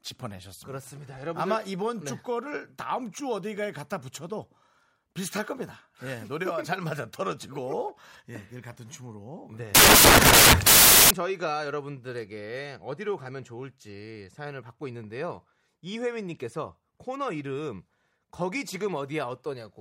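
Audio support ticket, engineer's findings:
Sample reader misassembling bytes, likely off-by-one byte offset or swapped byte order. 9.75–11.11 s: low-order bits become dominant, speech replaced by loud harsh broadband noise. Samples built from the wrong bytes.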